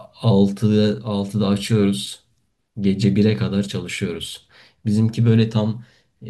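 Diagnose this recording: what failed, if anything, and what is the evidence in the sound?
Nothing failed: no audible defect in the speech at any stage from capture to playback, so there is no fault evidence to report.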